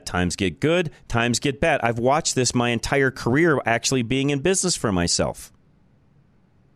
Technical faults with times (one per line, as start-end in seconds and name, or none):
none